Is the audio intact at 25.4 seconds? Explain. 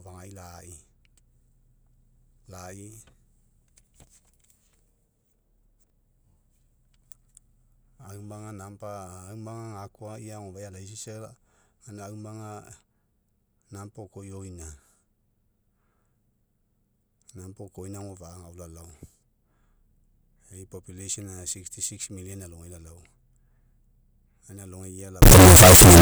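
No. From 25.22 s to the end at 26.01 s, the speech turns into loud, harsh distortion, likely a signed and unsigned mix-up in 16-bit samples: flipping the top bit makes every zero crossing jump across the full range.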